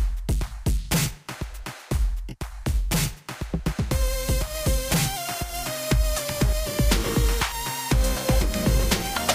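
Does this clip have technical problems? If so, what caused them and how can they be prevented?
No, there's nothing technically wrong to hear here, so there's no cause to chase down and nothing that needs preventing.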